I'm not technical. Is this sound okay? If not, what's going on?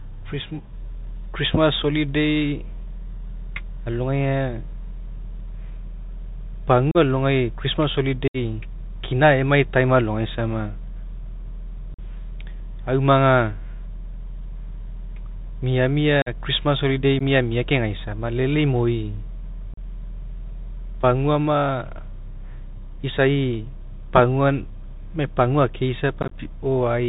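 No. The whole recording carries the Bluetooth CVSD headset codec: a narrow, phone-like sound with nothing bright on top, a fine grainy hiss under the speech, and scratchy s sounds. Unlike a plain phone line, the grit and scratchiness come from the headset's crude one-bit coding.

There are also seven moments of unconcealed Bluetooth headset packet loss, where bits of sound vanish into sudden silent gaps, sometimes with a click: 6.91–6.97, 8.28–8.37, 11.94–11.99, 16.22–16.29, 17.19–17.22, 19.74–19.78, and a crackly, chopped patch around 26.22–26.34. These are clean holes, not blurred or warbly patches.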